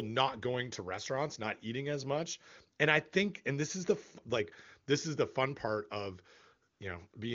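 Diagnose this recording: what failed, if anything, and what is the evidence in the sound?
AMR comfort noise in call processing: at 6.73–6.79 s and 7.11–7.13 s, speech frames stop and smooth synthetic hiss replaces the background, unlike a dropout's dead silence.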